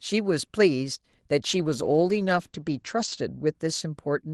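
Speech carried over an Opus call path shows a call bitrate drop from 1.5 to 3.61 s. The sound turns rough and muffled as the bandwidth narrows from 12 kHz to 8 kHz, which fits the encoder falling from about 32 kbps to 12 kbps.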